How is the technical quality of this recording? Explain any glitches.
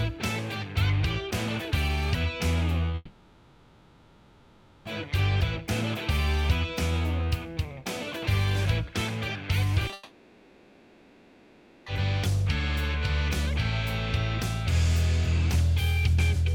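The recording has serious transmission problems, with two long breaks and some choppy patches.

From 2.78 to 2.94 s there is repeated packet loss, giving a robotic sound. Five short gaps, each up to 10 ms, are patched by repeating the previous sound, covering about a third of that span. The result is choppy and robotic, and a spectrogram shows a row of copied, striped slices.

Immediately afterwards, from 2.95 to 4.86 s, and again from 9.93 to 11.87 s, comes a long network dropout lasting about 1.9 s each time. Throughout, an artificial smeared continuation of the last sound plays instead of real audio, and the original material in those stretches is lost. This is likely caused by the connection stalling. On a spectrogram each dropout shows as a blurred, featureless band, with no silent gap in the waveform.

Just before the second dropout, at 9.87 and 9.90 s, there is short concealed packet loss. 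Two back-to-back 20 ms holes are filled by extending the preceding sound, heard as a quick smear or wobble. A spectrogram shows brief smudged frames.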